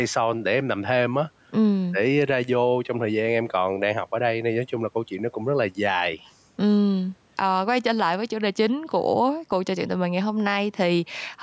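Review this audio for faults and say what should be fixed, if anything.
Gain pumping throughout: the gain swings around 10 dB with loud speech, likely from microphone gain set too high driving a fast limiter. Lower the microphone input gain so the limiter only catches occasional peaks.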